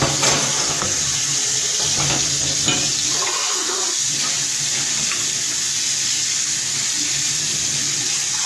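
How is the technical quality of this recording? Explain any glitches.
Technical quality is compromised by plainly audible AAC compression running throughout. The audio sounds dull and smeared, with nothing above 12 kHz and a warbling, fizzy texture. The likely cause is AAC-LC coding at a low bitrate, fitting roughly 32 kbps, which lowers the cut-off and coarsely quantises the spectrum.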